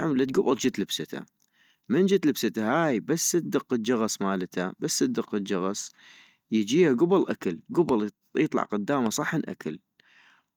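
Two loud pops, at 7.89–7.91 s after "الجغص يجيها كبل آكل" and at 9.06–9.08 s after "يطلع قداما", each about 10 dB above the speech, likely from sudden voltage spikes.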